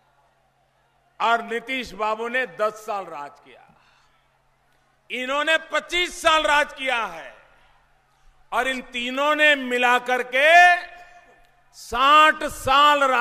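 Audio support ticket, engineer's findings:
No faults found on listening; nothing to flag for any component. No working path is listed to comment on further.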